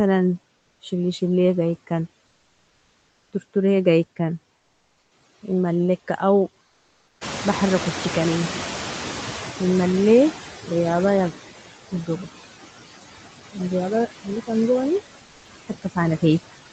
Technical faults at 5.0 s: noise suppressor artifacts; comfort noise in place of the background

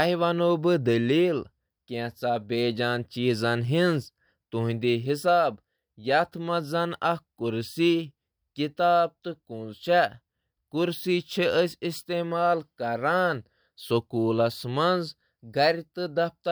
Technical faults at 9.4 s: none

